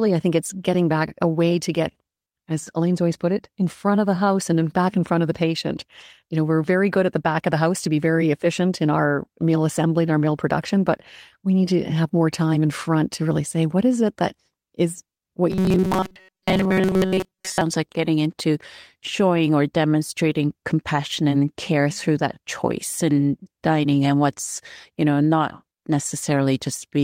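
From 15.51 to 17.61 s the speech turns into a rigid, metallic buzz pitched at 188 Hz that only loosely tracks the syllables. This robotic sound from repeated short buffers likely comes from a snippet of roughly 5.3 ms being looped while most of the real audio is skipped.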